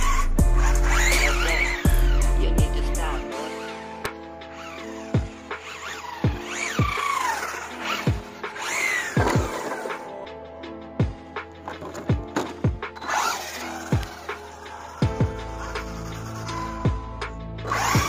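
Two sharp snaps sit on top of the audio, at 4.05 s and 14.03 s. Each is over almost instantly. The first is very loud, peaking around -5 dBFS. The second is much quieter. Both are electrical switching spikes. They are likely arcs from a nearby switch, motor or static discharge, picked up by the audio line. The snaps are added to the sound and do not replace it.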